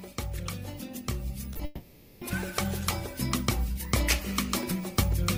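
Around 1.53 s and again at 1.57 s there's short concealed packet loss: two back-to-back 20 ms chunks didn't make it to the decoder, so it stretched the preceding sound to cover each hole. You hear that as a quick smear or wobble before things settle.

Then from about 1.65 to 2.23 s the audio drops out for roughly 0.56 s, likely a long network dropout. The receiver keeps extending the last sound across the whole gap as a fading buzzy, hissy tail, never reaching true silence, before real audio resumes with that stretch gone.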